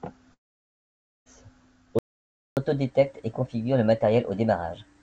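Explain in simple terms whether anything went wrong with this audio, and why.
Long network dropout, from 0.34 to 1.27 s: the sound breaks off and the last bit of speech is stretched into a fading buzz, then almost total silence for nearly a second. When the speech comes back, about 0.92 s of it is simply gone rather than delayed. The likely cause is that no audio packets reached the receiver during that stretch, so it filled the gap with a guess and then gave up.

Playback stall, from 1.99 to 2.57 s: the speech stops in mid-flow and goes silent for about 0.58 s, then picks up again. The player had no data ready to send to the speakers, so it paused. The likely cause is that its supply of audio ran dry or its processing was briefly held up.

Catch-up at higher speed, from 2.57 s to the end: right after the stall, the speech plays about 1.15 times faster and sounds roughly two semitones higher, a little chipmunk-like. 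This happens because the player is working through the audio that piled up during the pause. It speeds everything up, pitch included, to get back in step with real time.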